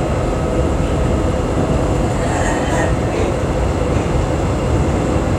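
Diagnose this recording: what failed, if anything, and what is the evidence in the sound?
Nothing failed in this recording.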